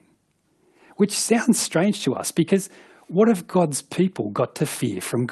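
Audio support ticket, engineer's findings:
No faults found on the call path.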